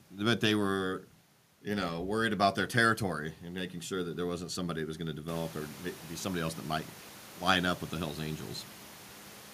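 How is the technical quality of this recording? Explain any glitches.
No glitches or technical faults can be heard in the recording. The background noise of the room rises by about 15 dB at around five and a half seconds, but it stays about 21 dB below the speech.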